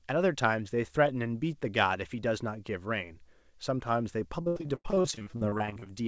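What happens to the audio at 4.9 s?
Choppy, robotic speech with pieces missing from 4.42 to 5.87 s: repeated packet loss, each gap of up to 89 ms filled by extending the previous sound.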